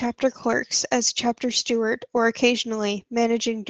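Lost packets rebuilt from error correction at 0.43 to 0.53 s in this speech recording: about 60 ms of audio, likely three packets, was replayed from lower-quality copies and sounds briefly rougher and noisier instead of dropping out. The rest passes through a call path whose coding and 8 kHz band limit suggest Opus at around 24 kbps.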